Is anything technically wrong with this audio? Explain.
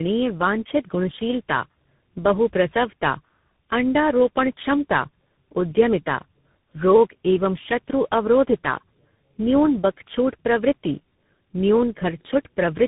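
Yes. Throughout the speech, the sound is rough, muffled and warbly, with nothing above 3.8 kHz. This is tandem speech coding: three lossy speech codecs in a row, such as AMR-NB, GSM full rate, then CVSD, each re-coding the previous one's already degraded output, so the damage compounds.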